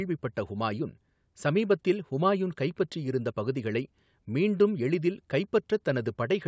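Nothing in this speech recording stands out as a technical fault. It has passed through a call's microphone processing, so the lowest bass is trimmed away and nothing is heard above 8 kHz.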